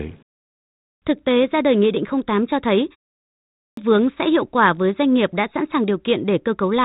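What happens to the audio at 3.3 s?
At 3.3 s the clip is inside a clipped start after a pause, running from 3.19 to 3.77 s. After "cho thấy" comes a pause of about 0.32 s, long enough for the output to go idle, and it takes roughly 0.58 s to wake again, swallowing the onset until the sound resumes at "vướng sẽ hiệu quả". Unlike the gentle fades of muted pauses, which lose nothing, the speech here bursts in abruptly with its opening missing.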